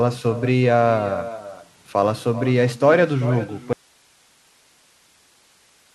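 From the start, every phrase is followed by a quieter, thinner copy, about 13 dB down and roughly 400 ms late: echo with no canceller, the far end's loudspeaker feeding its microphone back down the line. At 3.73 s the speech cuts off abruptly and only faint hiss remains to the end, far below the speech level. This is an audio dropout to a faint residue, likely the signal being lost while the path after the break stayed live.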